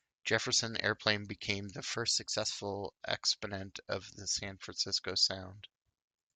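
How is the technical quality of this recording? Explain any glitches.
A drift correction step mars the speech from 1.93 s to 2.60 s, after "became the". Clock-matching software likely jumped the playback rate by 5.8% to rebalance its buffer, so speed and pitch rise together by 98 cents, about a semitone, then snap back before "exponent of the".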